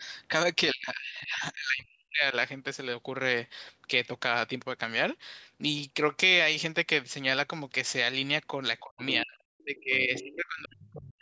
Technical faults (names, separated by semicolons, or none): speech suppressed in double talk; other side's voice leaking through